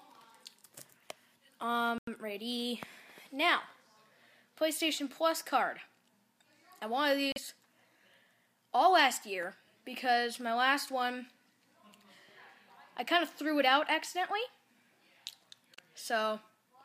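A Bluetooth stall, most likely from radio interference delaying packets until the headphones' buffer emptied, interrupts the audio three times. At 1.98 s, 7.32 s and 15.75 s, playback drops to dead silence for about 91 ms, 40 ms and 32 ms respectively, then resumes. The gaps sound like brief, abrupt dropouts rather than fades.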